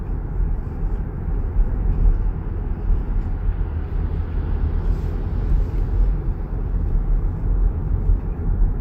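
No technical fault can be heard anywhere in the sound; the signal holds steady throughout, with nothing interrupting or degrading it.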